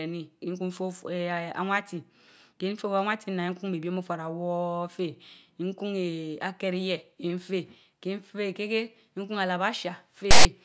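File tags played as audio appear from 10.31 to 10.45 s, near the end of the speech. For about 0.14 s, a block of text metadata stored in the file is decoded as though it were sample data. Because character bytes sit within a narrow range of values, the result is a loud, harsh rasp pushed off-centre to one side of the waveform. It starts and stops abruptly, with hard edges, like a short burst of static.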